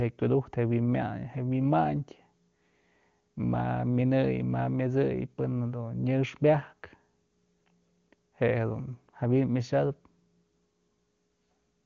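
No technical faults are audible.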